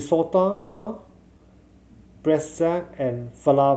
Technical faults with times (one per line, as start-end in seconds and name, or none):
0.51-0.87 call audio freeze